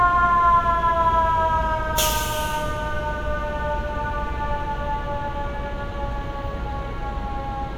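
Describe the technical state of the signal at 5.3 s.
At 5.3 s the signal is intact, with no audible fault at that moment.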